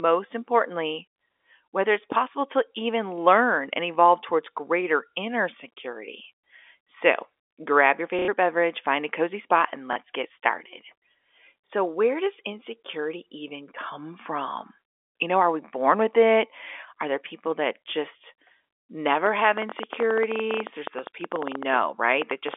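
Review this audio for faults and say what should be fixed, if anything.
Packets were dropped on the network and the receiver covered each gap by replaying the last packet it had. This happens three times. From 8.19 to 8.28 s, just after "grab your", 90 ms is filled this way; at 9.93 to 9.96 s, after "a cozy spot and", and at 11.68 to 11.70 s, before "where does insecurity even", 30 ms each. The repeat pattern fits 30 ms packets. The copies don't align with the speech pitch, and the longest gap buzzes at about 33 Hz as a brief robotic stutter. A larger jitter buffer with proper packet loss concealment, or better network stability, would prevent it.

From 19.26 to 22.55 s, something is injecting pulses into the signal, most likely electrical interference from nearby equipment or a failing interface. The result is a train of clicks: around forty similar pops at about 11.3 per second on average, spaced irregularly and peaking about 10 dB above the speech. 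They sit over the narrowband G.711 telephone sound and stay audible in the pauses as an uneven ticking. Moving the interfering equipment away from the line, or replacing the faulty interface or cable, would prevent it.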